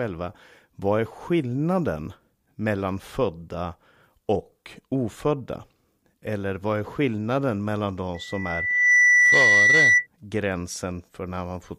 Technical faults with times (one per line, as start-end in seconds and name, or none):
8.14-10.07 loudspeaker feedback squeal